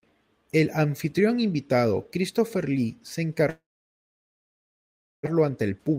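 At 3.49 s the speech breaks off. For a brief moment the last sound carries on as a fading buzz, and then nothing is left but silence until 5.27 s. This is most likely a long network dropout, with about 0.94 s of the audio never arriving. On a waveform, a short decaying tail gives way to a flat line lasting about 1.6 s. On a spectrogram, smeared harmonics fade into an empty band. The audio resumes later, with the lost portion gone and the timing shifted by something like 0.7 s.

From 5.35 s to the end at 5.98 s there is a jitter buffer speed-up. Having built up a backlog, the receiver trims tiny pitch-period slices, around 70 ms in total, so the speech plays about 110% fast while its pitch stays the same. It sounds hurried. A spectrogram shows compressed syllable spacing with unchanged harmonic spacing. The waveform shows cycles of unchanged length, with many small joins where pieces were cut.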